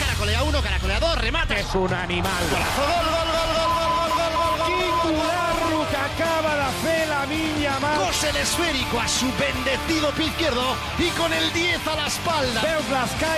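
No dropouts, clicks, distortion or other faults can be heard anywhere in the recording.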